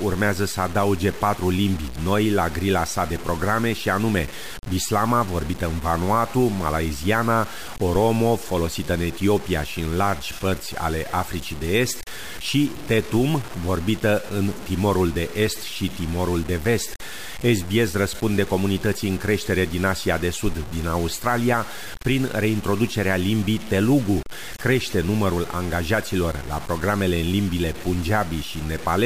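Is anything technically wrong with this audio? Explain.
Yes. Throughout the speech, from start to finish, the sound is coarse and grainy, with a gritty distortion that rises and falls with the voice rather than sitting underneath it as steady hiss. Quiet passages and decaying syllable tails sputter or snap to silence. The likely cause is low bit depth without dither: the signal seems to have been truncated to about 5 bits, so the rounding error tracks the waveform and sits only around 20 dB below it.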